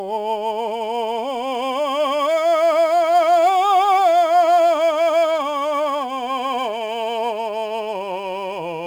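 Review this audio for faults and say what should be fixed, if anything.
A gritty, inharmonic fizz rides on the louder and brighter passages of this music throughout, sitting roughly 30 dB below it. That points to crude rate conversion, likely 48 kHz to 44.1 kHz by nearest-sample picking, which drops samples in a repeating pattern and creates unrelated tones. Redo the conversion from the original with a proper band-limited resampler.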